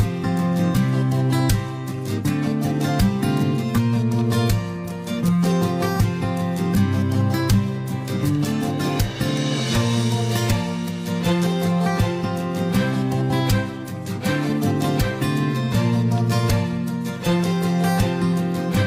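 No fault is audible anywhere in the recording.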